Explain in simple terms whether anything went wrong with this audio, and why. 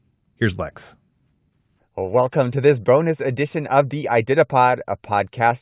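Nothing went wrong with this audio.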